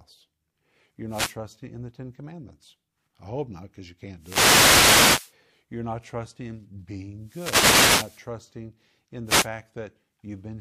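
Bursts of swishing static cut through the speech at 1.08–1.37 s before "in the", 4.18–5.35 s after "hope not because you", 7.21–8.28 s after "not trusting", and 9.25–9.49 s. These are wireless microphone noise hits: the FM radio link fades as reflections cancel, letting receiver noise surge over the speech.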